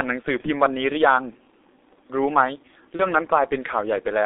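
The whole thing runs through a G.723.1 codec, and it's a heavy hit. The speech sits in a narrow phone band, roughly 300 Hz to 3.7 kHz, so it's muffled with no air on top, and the coarse, slowly updated voice model leaves it hoarse with smeared consonants. The degree of damage points to the 6.3 kbit/s mode.

Then there are two dropouts, VoIP packet loss concealed by the speech codec, at 0.41 to 0.48 s and again at 2.97 to 3.06 s. Each gap fits a single lost 30 ms frame. The decoder fills the hole by carrying on from its last pitch and filter settings and pulling the level down, so you hear a brief fading stretch, a buzzy tone or coloured noise, where the speech should be. Because each frame leans on the previous one, the voice stays weak or distorted for tens of milliseconds or more after the packets come back.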